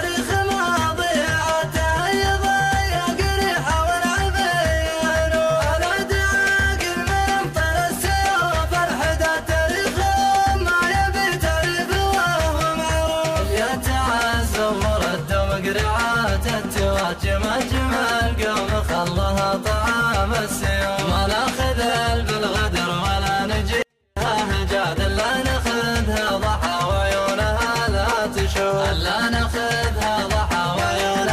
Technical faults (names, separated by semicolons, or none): 24-bit alignment error (too quiet)